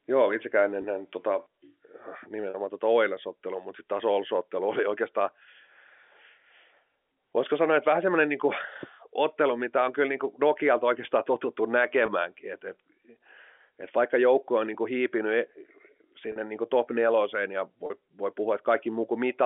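Packet loss with pitch repetition hits at 0.82, 2.50, 12.06, 16.32 and 17.86 s, lasting 20 ms at the first and third and 40 ms at the others. The receiver repeats the last pitch period across each gap, giving a brief, slightly buzzy held tone.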